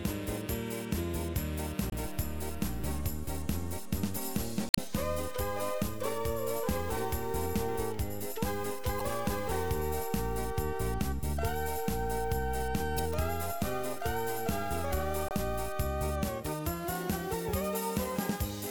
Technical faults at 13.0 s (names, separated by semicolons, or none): damaged data in a compressed stream